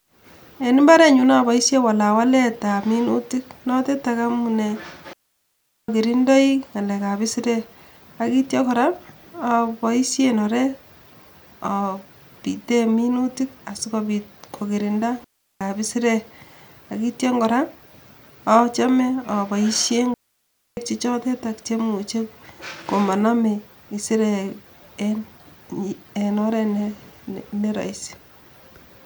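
Digital wireless dropouts at 5.13 s after "walawaletab minutik notetak amunee" (0.75 s), 15.24 s after "minutik sikobit kokirinda" (0.37 s), and 20.14 s before "che chotetetak chemuche" (0.63 s): the receiver lost too much data and muted quickly, leaving clean near-silent holes without noise bursts.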